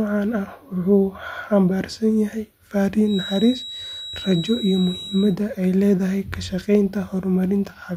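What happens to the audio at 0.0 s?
Nothing goes wrong at 0.0 s; the audio is intact, with no technical fault at that point.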